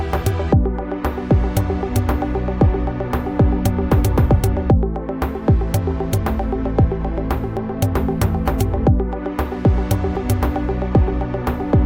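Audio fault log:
0.0–2.0 s, adaptive stream starting at a low bitrate: dull, smeared treble with harsher codec artefacts, then a sudden clean lift at 2.0 s as the player stepped up, which fits roughly 32 to 64 kbit/s.
7.57 s, dropped buffer (overrun): a brief, small jump forward in the sound, likely a few milliseconds of samples overwritten before collection, joining both sides directly.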